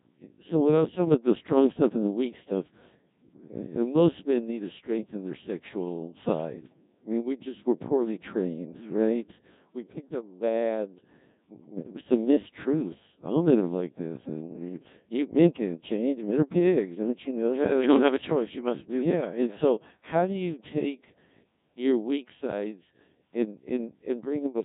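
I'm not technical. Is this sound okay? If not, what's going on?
No. The speech sounds robotic and buzzy from start to finish. That is the mark of the Codec 2 vocoder, a very low-rate system used on digital radio. It doesn't send the real sound wave. It sends only a few facts: the pitch, whether the sound is voiced, how loud it is, and its rough tone shape. The receiving end then rebuilds the voice from simple tones. Here the damage is heavy, so the voice sounds machine-made throughout.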